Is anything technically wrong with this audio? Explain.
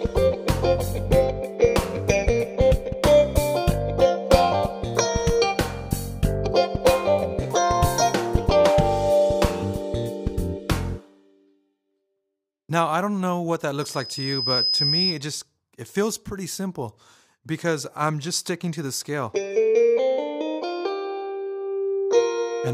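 Yes. A loudspeaker feedback squeal runs from 13.80 to 15.22 s. A microphone is picking up the loudspeaker it feeds, and at 5 kHz the gain around that loop climbs past one, so the tone keeps reinforcing itself on each pass. It can be heard as a thin, piercing 5 kHz whistle that swells over roughly three-quarters of a second until it is about as loud as the rest of the sound, then holds as a steady squeal until it stops.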